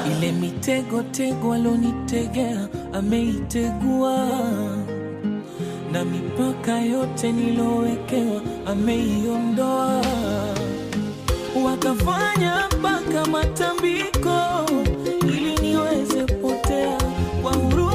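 From 8.15 s to the end, a crude rate conversion changes the sample rate by keeping the nearest samples rather than filtering, which fits a 48 kHz to 44.1 kHz conversion. The resulting gritty, inharmonic fizz sits roughly 30 dB below the audio and tracks its louder, brighter passages.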